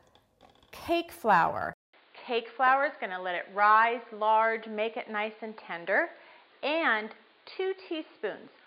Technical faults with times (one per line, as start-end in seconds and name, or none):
1.73-8.66 input switched to a poorer device